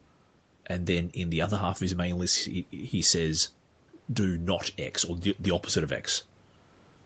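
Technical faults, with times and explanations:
No technical faults; the speech carries nothing above 8 kHz, which is the normal bandwidth limit of the call path and not a defect.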